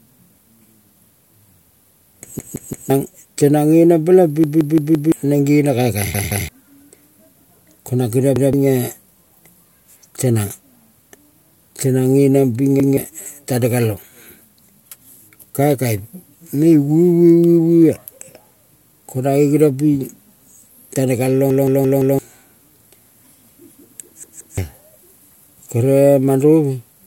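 Speech with repeated buffer stutters at 2.39–2.90, 4.44–5.12, 6.14–6.49, 8.36–8.53, 12.80–12.97, 21.50–22.19 and 24.24–24.58 s. Each time, a 170 ms piece replays with hard joins. New audio arrived late, so the last buffer played again. The length fits an 8192-sample buffer.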